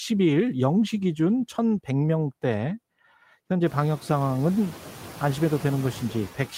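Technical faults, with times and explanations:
Throughout, noise suppressor artifacts: the steady background drops by about 12 dB between phrases and rises again under the speech, most clearly after the room noise climbs around 3.5 s. Unlike a gate, the noise is lowered band by band rather than muted.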